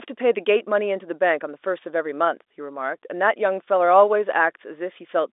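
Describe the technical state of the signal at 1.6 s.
At 1.6 s the speech is intact, carried cleanly over G.711 telephone coding with its usual narrow line band of roughly 300 Hz to 3.6 kHz and nothing above about 3.8 kHz.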